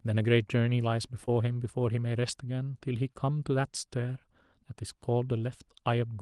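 At 1.25 to 1.29 s there is a brief smear in the speech, a small wobble where the sound seems to hang for an instant before the real signal picks up again. This is short concealed packet loss: about 20 ms of audio arrived too late or not at all, and the receiver covered the gap with roughly 19 ms of synthesised continuation of the preceding sound, then crossfaded back into the genuine stream.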